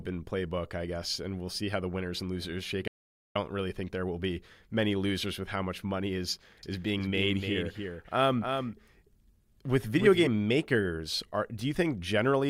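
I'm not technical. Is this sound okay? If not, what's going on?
No. From 2.88 to 3.36 s the speech cuts to dead silence for about half a second, an audio dropout to silence, likely a brief lost connection. From 6.63 to 10.27 s a quieter echo trails about a third of a second behind, a doubled audio track, likely a second copy of the recording mixed in.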